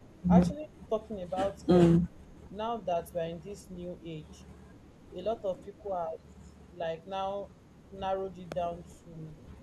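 A loud pop at 0.43 to 0.45 s, likely a voltage spike from a switch or static, shows as a single tall vertical spike about 15 dB above the speech, with the speech continuing under it. From 0.57 to 0.73 s and again at 1.63 to 1.67 s, speech is suppressed in double talk. The level dips by roughly 10 dB, visible as a brief notch in the waveform envelope and a thinned-out spectrogram, likely because the echo canceller turned the talker down while the far side spoke. A second identical loud pop follows at 8.52 to 8.54 s.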